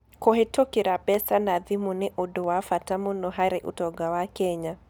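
Sharp single clicks at 1.14, 2.44 and 3.65 s in the speech most likely come from dropped samples: a fraction of a millisecond vanishes, so the waveform jumps abruptly, with no audible gap, unlike a dropout.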